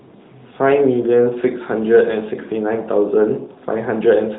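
Nothing technically wrong can be heard in this speech clip. It has the narrow band of the AMR narrowband mobile codec, with nothing above 4 kHz and only light coding texture, which fits AMR-NB at its top 12.2 kbps mode.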